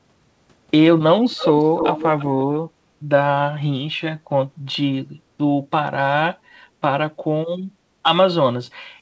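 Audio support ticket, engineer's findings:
Echo leak, 1.31 to 2.25 s: delayed copy of the speech trailing by 322 ms, only a few dB under the original. Likely a loudspeaker at the other end, with its echo canceller missing some mic pickup and sending it back.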